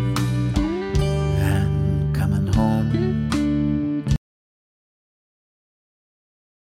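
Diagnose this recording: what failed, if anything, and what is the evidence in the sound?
The input feed was likely lost upstream of the recorder, at the analogue wiring or device connection, while writing continued. The audio dropout to silence begins abruptly at 4.16 s and runs to the end: plain silence with no room tone, and whatever followed is gone.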